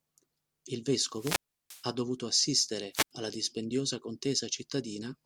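Wireless microphone squelch dropouts occur from 1.09 to 1.89 s and again from 2.92 to 3.11 s. In each, the radio link from the analogue FM microphone weakens, hiss swells, and the receiver's squelch shuts the output off, leaving a hole of near silence in the speech. The first mute lasts about 340 ms. The second is shorter, about 80 ms, before the signal recovers and the speech returns.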